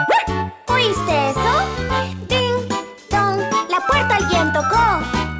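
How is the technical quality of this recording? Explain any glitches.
The recording carries a steady glitch from 0.9 s to the end. A fine, rasping buzz rides on the sound at about 50 Hz, and it is present only while there is signal. This is a resampler restarted on every block: each 20 ms chunk was converted on its own, so at every chunk edge the converter lacked the true neighbouring samples and left a small error. Those errors repeat at the block rate, 50 per second, fusing into a buzz rather than separate ticks. The conversion points to a change from 44.1 kHz down to 16 kHz.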